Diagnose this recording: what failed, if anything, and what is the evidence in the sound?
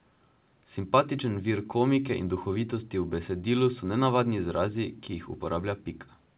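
Nothing in this speech recording points to a failure at any stage. The sound stops at about 4 kHz, which fits a narrowband call codec such as G.711 mu-law at 64 kbps doing its normal job.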